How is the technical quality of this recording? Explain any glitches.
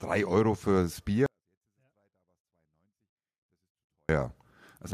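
The recording has one clear fault, a sudden collapse in level partway through the speech. From 1.26 s to 4.09 s there is a 24-bit alignment error that leaves it too quiet. The samples sit in the low 24 bits of a 32-bit word but are read as full 32-bit values. The level falls by about 48 dB at once. The sound stays clean but becomes almost inaudible until it returns.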